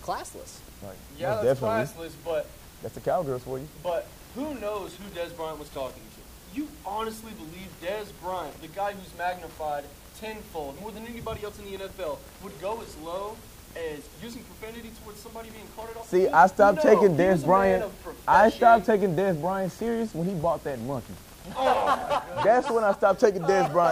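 A Bluetooth SBC bit pool drop, from 12.48 to 14.21 s and again from 19.89 to 22.70 s, thins the encoding to what sounds like roughly half its bit pool, dulling treble and adding gritty noise.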